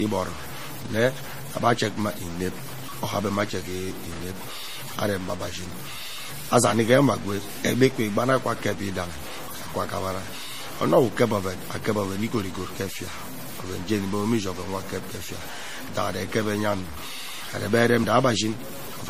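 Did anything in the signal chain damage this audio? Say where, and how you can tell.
Yes. At the sample-format conversion stage, the speech carries grainy, signal-following distortion from start to end, with quiet passages turning gritty and sputtering. That's low bit depth without dither, likely about 6 bits truncated rather than rounded. Since there's no dither, the error tracks the signal instead of sitting as a steady hiss, and the grain sits only about 15 dB below the speech.

The codec stage adds its own mess. You hear two flavours of lossy artefacts stacked on each other, and nothing comes through above 15.2 kHz. That points to transcoding between lossy codecs, likely a low-rate MP3 pass around 40 kbit/s re-encoded to Vorbis at about 58 kbit/s. The second encoder wastes bits copying the first one's damage, and the cut-off from the chain sticks.

Then at the driver or buffer stage there's a jump at 18.04 s where the audio skips ahead with no gap of silence. 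That's a dropped buffer (overrun), likely the app not reading samples before the hardware overwrote them. Roughly 15 ms went missing, and the two sides got butted together.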